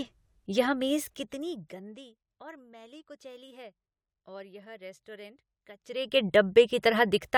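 Speech, with zipper noise at 0.99–2.14 s, a drop of roughly 20 dB ending just before "और मैली कुचैली है", and again at 5.76–6.21 s, a rise of roughly 20 dB. The gain moves in unsmoothed steps, around 100 per second, each leaving a tiny click, so a fine buzzy ticking rides on the speech while the level slides. A properly smoothed fade glides silently.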